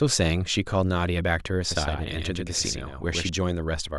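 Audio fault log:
1.71–3.29 s, doubled audio track: a full-band copy lags about 100 ms, somewhat quieter, with abrupt edges and no echo-like decay, likely from a second capture path.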